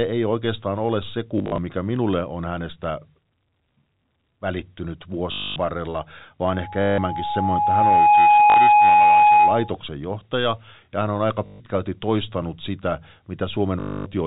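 Packet loss with last packet repeated first appears from 1.38 to 1.58 s, between "ei oikeastaan ole se" and "mikä minulle on hänestä". There, 120 ms of audio drops out in short bursts spread over 200 ms, the longest lasting 40 ms. The receiver fills each gap by replaying the previous packet, and because the repeats don't line up with the pitch, the run buzzes roboticly at a rate that fits 20 ms packets. The same stutter returns from 5.32 to 5.56 s, with 240 ms lost.

Loudspeaker feedback squeal runs from 6.52 to 9.76 s and stops just before "johtaja ja hän on". The microphone picks up its own loudspeaker, and at 834 Hz the loop gain exceeds one, so a single tone swells over roughly a second and a half to about 10 dB above the speech. Beneath the squeal the packet-loss stutter recurs from 6.82 to 6.98 s (160 ms lost) and from 8.5 to 8.56 s (60 ms). It comes back from 11.46 to 11.6 s, between "ja hän on aika" and "toistanut sitä" (140 ms), and once more from 13.8 to 14.06 s (260 ms).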